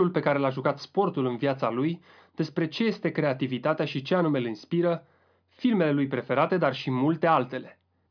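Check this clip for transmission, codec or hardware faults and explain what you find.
Nothing wrong can be heard anywhere in the recording.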